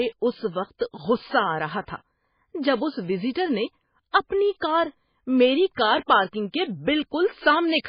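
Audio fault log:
Throughout, MP3 compression: likely an MP3 encoder starved of bits, fitting roughly 16 kbps, which removes everything above 5 kHz and switches weak frequency bands on and off between frames, so the speech sounds dull, muffled and heavily watery and swirly.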